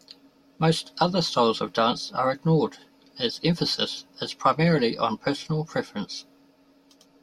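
No technical faults can be heard anywhere in the speech. There is nothing to mark at any point in time.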